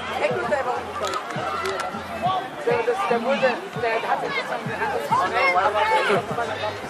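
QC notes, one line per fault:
Nothing to flag here, the audio runs along without any technical trouble worth noting.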